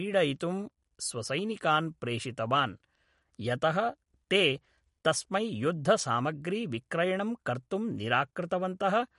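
MP3 compression throughout: treble stops at 11.2 kHz and weak frequency lines flicker between frames, making the speech plainly watery, likely from an encoder starved near 48 kbps.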